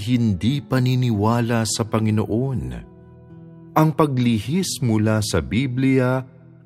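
No technical faults are audible anywhere in the audio.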